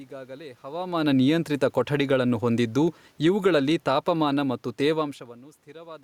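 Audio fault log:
3.1–5.18 s, automatic gain falling: after "ಹವಾಮಾನ ನಿಯಂತ್ರಿತ ಕೊಠಡಿಗಳನ್ನು ಹೊಂದಿದ್ದು", the automatic gain control judged the input too loud or its background noise too strong and eased its gain down by about 5 dB over roughly two seconds, so the speech and the room noise behind it sink together.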